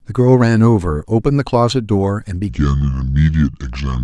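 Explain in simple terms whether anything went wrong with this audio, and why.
Something did go wrong. From 2.49 s to the end at 4.04 s, there's a section at the wrong speed: the speech suddenly plays at 0.694 times its proper rate, so it turns slow and drops roughly seven semitones deeper. That's likely a player or editor running it against the wrong clock.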